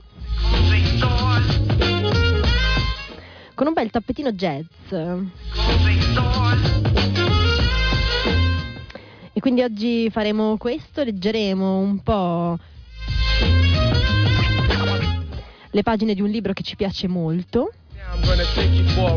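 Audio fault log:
No fault to log.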